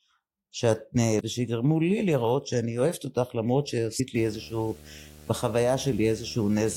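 Damaged data in a compressed stream appears at 1.19 s and again at 3.99 s. Each is a brief squawk or blip where the decoder hit corrupted frames, lost sync and skipped ahead to the next valid frame header.

Video or display buzz begins at 4.15 s and runs to the end. A screen or its video cable is coupling into the audio path, producing a buzz at a 75 Hz field rate with hash above it, sitting roughly 25 dB below the speech.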